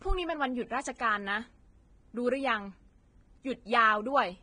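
Vorbis compression runs throughout this speech, likely the cause of its grainy, hissy texture. The treble is quantised so coarsely that detail turns to noise, with nothing above 9.7 kHz, which fits a low bitrate of around 22 kbps and heavy codec damage.

Pre-echo appears from 0.97 to 1.00 s, a 25 ms smear ahead of a sharp onset. Quantisation noise sized for the loud attack has spread back into the quiet moment before it, so a brief hiss leads in and the attack sounds softened.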